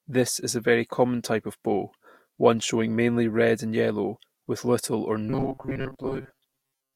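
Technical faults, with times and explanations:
5.3 to 6.95 s, robotic sound from repeated short buffers: the speech collapses into a stiff metallic buzz pinned at 134 Hz, likely because audio arrived too slowly and a chunk of roughly 7.5 ms kept getting replayed, so most of the real signal was skipped.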